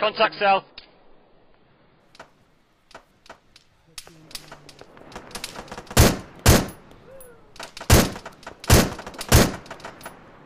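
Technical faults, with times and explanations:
0.0 to 2.0 s, adaptive stream starting at a low bitrate: nothing above 5.3 kHz and stronger codec artefacts, which sounds like a very low-bitrate AAC rendition picked for a quick start. At 2.0 s the player switches to a much better one, and the treble returns with no gap.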